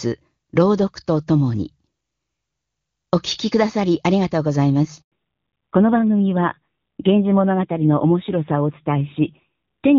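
Up to 5.02 s the speech runs on the AMR wideband (HD Voice) codec, with little or no audible coding damage, which fits a high rate around 23.85 kbit/s. Then comes a handover gap: the call gets passed between networks and no speech frames make it through for 100 ms, so the audio drops out until about 5.12 s and whatever was said in that stretch is simply gone.

Right after the link comes back, at 5.12 s, there's a fallback to narrowband that lasts to the end. Nothing above 4 kHz survives, so the speech turns duller and a bit rougher, which points to AMR-NB at around 7.4 kbit/s taking over.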